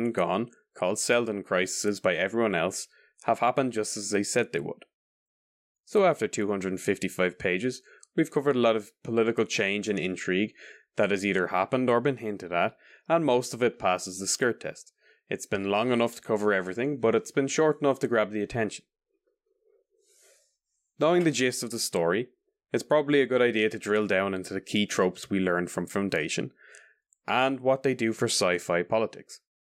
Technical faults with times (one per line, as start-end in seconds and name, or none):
none